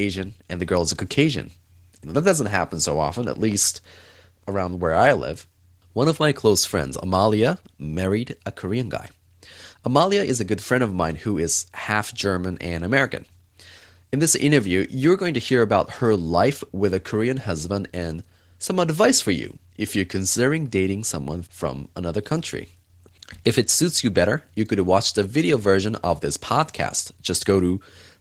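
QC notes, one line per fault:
Throughout: Opus voice compression. The speech is hoarse and slightly robotic because the excitation is coded coarsely. The sound points to a low bitrate around 16 kbps in hybrid mode. The linear-prediction layer carries the band below 8 kHz and a transform layer sketches the top end. The full bandwidth is kept rather than narrowed, so the loss shows as grainy, buzzy texture, not as muffling. The damage is plainly audible.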